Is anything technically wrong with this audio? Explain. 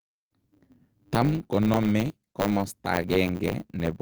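Yes, there are two faults in this speech clip.

Throughout the clip, a steady buzz at 100 Hz sits under the speech, and everything runs slightly fast, about 1.07 times normal speed, while the timbre stays the same. This is a block size mismatch (truncated). One stage hands over longer blocks than the next stage takes in, and the tail of each block is dropped. The sound fits 512-sample blocks being read as shorter ones. Chopping the audio a hundred times a second produces the buzz. Discarding those tails squeezes time by the ratio of the two sizes, so the speech is quicker while keeping its timbre.

At 2.51 s, there is a brief patch, about 20 ms long, where the speech turns rougher and noisier, with no gap or dropout. This is a lost packet rebuilt from error correction. A single packet failed to arrive, but the following packet carried a low-bitrate backup copy of it. The decoder played that copy in place of the missing audio, so playback stays continuous. 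Because the copy is coarser, that moment sounds grainier than the speech around it.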